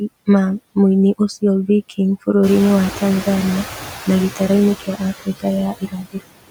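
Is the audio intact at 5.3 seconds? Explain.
No. From 5.25 to 5.45 s the speech is cut by the noise suppressor. It mistook part of the speech for background noise and pulled it down with the noise by up to about 16 dB. Roughly a tenth of a second of sound comes out swallowed and faint.

Noise suppressor artifacts are also present at that moment. The suppressor lowers the bands it treats as steady noise by about 14 dB, frame by frame. The noise pumps under the speech.

Channel delay (comb filtering) is there too. One channel lags by roughly 10 ms, and summing to mono cancels evenly spaced frequencies, starting near 50 Hz. The result is a fixed, hollow, phasey colouring.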